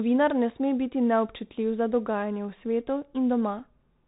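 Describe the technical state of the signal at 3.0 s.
At 3.0 s the speech carries Bluetooth CVSD headset codec damage, present across the whole clip. Each sample is coded as one up-or-down step whose size adapts, which fits a 64 kbps stream. Nothing above 4 kHz survives. S sounds turn scratchy, loud highs distort, and granular hiss sits underneath.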